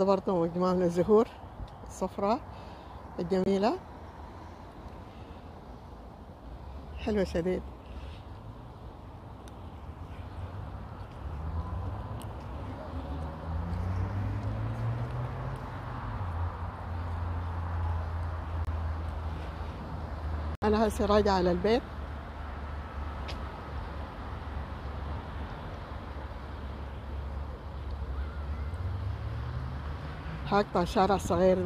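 At 3.44 s (40 ms), 18.65 s (35 ms) and 20.55 s (81 ms), corrupt frames were muted: abrupt, frame-length silences with no fade or concealment, and timing is preserved rather than skipped.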